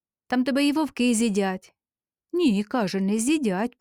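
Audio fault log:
Nothing stood out on listening.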